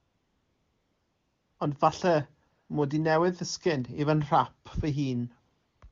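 Right from the start, 0.00 to 1.59 s, you get AMR comfort noise: the phone decided nobody was talking, stopped sending speech frames, and the far end filled the gap with a smooth, steady synthetic hiss in place of the real room. It happens again from 2.49 to 2.69 s, from 5.55 to 5.81 s, and in a brief blip at 5.89 s. Each time, the noise switches in and out as the texture flips.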